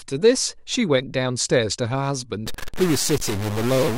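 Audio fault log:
2.46 to 3.97 s, stuck bit: a data bit likely jammed at one value offsets half the samples by a step around -25 dBFS, giving harsh buzzy distortion and noise-filled pauses.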